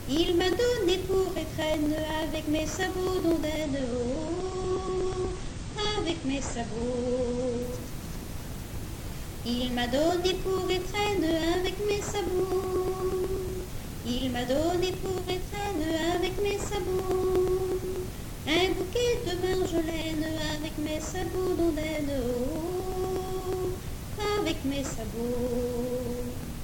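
Periodic USB or driver dropouts run from 0.17 to 26.55 s: a few milliseconds of audio are skipped every 0.121 s, giving ticks whose strict regularity separates them from random network packet loss. From 3.62 to 7.62 s the adaptive stream switches to a lower bitrate. Nothing above 9 kHz remains, which fits a drop from 96 to 32 kbit/s AAC, and the abrupt gapless change distinguishes it from gradual fading.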